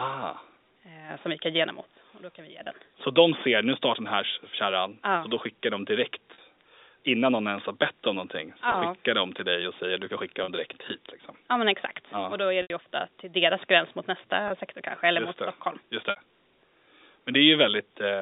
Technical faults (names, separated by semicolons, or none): packet loss with pitch repetition